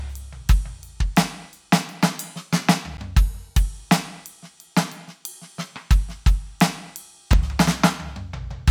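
At 2.97 s the music drops out for about 11 ms, a block of digital silence where the sound cuts out and comes back with no fade, which fits a 512-sample block. Being under 15 ms, it comes across as a tick or dip rather than silence. At 7.33 s there's a shorter one, under 3 ms and consistent with 128 samples, so it comes across as a quick tick rather than a hole.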